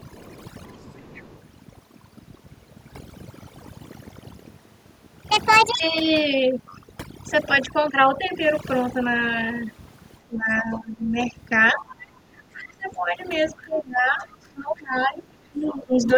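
Throughout the clip, the background is near-silent and dotted with twinkling specks. That is overdone noise removal: the reduction was set so strong that it shut off frequency bands near its noise estimate, taking quiet parts of the speech with them.

From 0.0 to 0.38 s, a faint second voice sits roughly 30 dB below the talker. It returns from 0.72 to 1.42 s, a little stronger at about 25 dB down. This is the other side's voice leaking through, likely loudspeaker echo that the echo canceller did not fully remove from the microphone.

Between 0.37 and 0.91 s, the talker's level dips slightly, by a few dB at most, while the other side is speaking. Much deeper losses follow from 10.27 to 11.17 s, 11.73 to 13.18 s and 13.62 to 16.17 s. Over these stretches the voice falls away by roughly 15, 25 and 20 dB at worst. This is speech suppressed in double talk, likely the echo canceller turning both voices down when it could not separate them.

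A brief scrap of the far voice also leaks through from 14.32 to 14.37 s.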